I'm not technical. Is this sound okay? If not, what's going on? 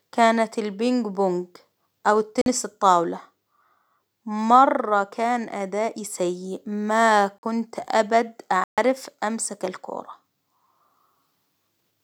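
No. The speech drops out three times, each a block of digital silence. At 2.42 s and 7.38 s the sound cuts to nothing for about 46 ms. At 8.64 s it cuts out for about 140 ms, until 8.78 s. The audio goes off and on instantly, with no fade. The short gaps sound like brief holes, and the longer one sounds like a bigger hole. The program most likely fell behind and didn't refill its output in time.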